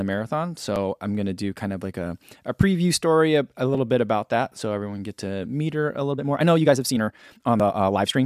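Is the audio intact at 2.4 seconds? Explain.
Yes, at 2.4 seconds the speech runs through without any dropout, click, distortion or other break in the signal.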